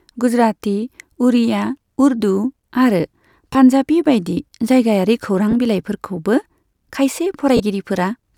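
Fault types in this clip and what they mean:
Lost LE Audio frames: the LC3 decoder patched 20, 20 and 30 ms gaps with the previous spectrum, signs randomised, producing brief noisy smears in the speech.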